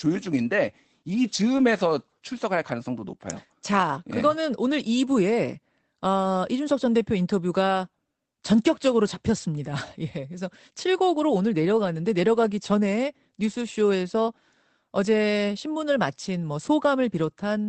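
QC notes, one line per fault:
1.57–1.59 s and 5.11 s, lost packet rebuilt from error correction: each is a 20 ms patch that turns rougher and noisier with no gap. A packet was lost, and the decoder filled in with the lower-quality Opus in-band FEC copy carried by the next packet.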